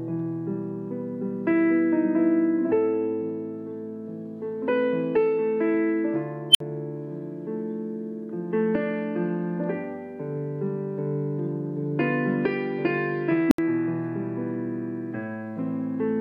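A high squeal near 3 kHz swells at 6.51 s, reaching clipping in about 37 ms before the sound drops out for about 56 ms, ending around 6.60 s. At 13.48 s a lower tone, roughly 300 Hz, does the same, building over about 34 ms and then going silent for about 73 ms until 13.58 s. Both are an unstable filter: a recursive filter with bad coefficients feeds its output back until it overflows, then mutes until it resets.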